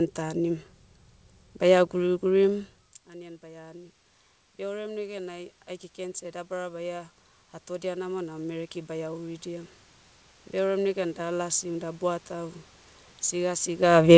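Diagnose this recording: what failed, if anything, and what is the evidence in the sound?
What went wrong is automatic gain rising in the call processing. Around 2.5 s the talker backs off and the level drops by about 20 dB. The AGC then climbs in two steps, about 4 dB between 3.06 and 4.02 s and another 9 dB or so from 4.57 to 9.76 s. You can hear the room noise swell right along with the voice, which shows it's a gain stage slowly hunting for level and not the talker coming back.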